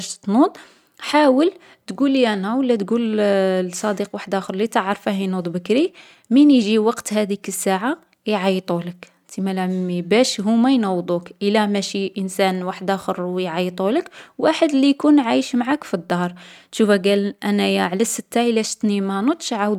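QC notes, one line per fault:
Nothing stood out on listening to the speech in this clip.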